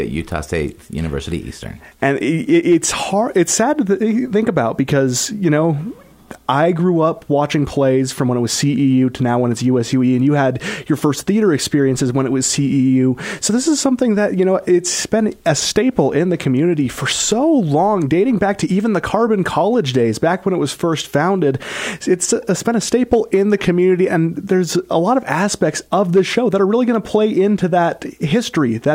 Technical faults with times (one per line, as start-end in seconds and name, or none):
0.11-28.95 clock slip clicks